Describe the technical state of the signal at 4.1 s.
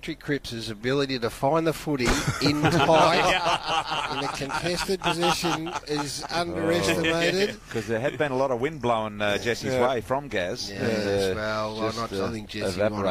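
At 4.1 s you're inside a block size mismatch (truncated) that runs from 0.81 s right through to the end. One stage is writing blocks longer than the next stage reads, which fits 1024-sample writes, and the tail of each block gets discarded. That leaves a seam at every block boundary, heard as a steady 43.1 Hz buzz riding on the sound. Pitch sits where it should, and playback here isn't sped up (speed ratio 1.0).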